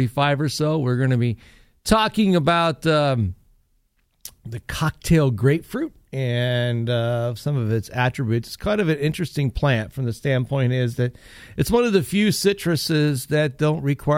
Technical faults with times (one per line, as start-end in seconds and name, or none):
none